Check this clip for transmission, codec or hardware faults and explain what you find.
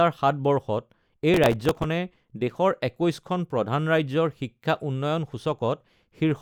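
There's one fault: processor overload crackle from about 1.34 to 1.84 s. The processor kept missing its deadlines, and each missed buffer replayed a sliver of old audio with hard edges. That points to about twenty misses on buffers of a few milliseconds, heard as a gritty tearing over the speech.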